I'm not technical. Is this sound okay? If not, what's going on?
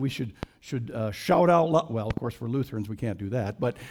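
No, there are two problems, both a loud pop. At about 0.43 to 0.45 s there's one sharp pop, and from about 2.1 to 2.2 s there are two in quick succession. Each jumps out well above everything else, while the sound keeps going underneath. They're likely sudden electrical jolts entering the signal, say from a cable being plugged in, a switch being flipped, a spark of static or a glitch in the audio hardware.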